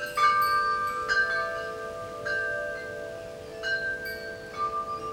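Nothing technical stands out in this short recording of sounds; there's no fault here to point to.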